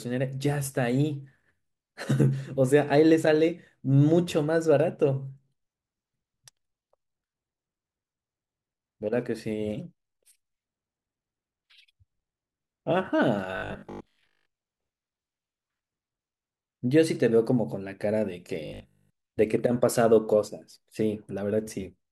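From 13.57 to 14.55 s and again from 18.66 to 19.10 s, the speech turns into a rigid metallic 50 Hz buzz. This robotic sound likely comes from repeated 20 ms buffers replacing most of the real audio.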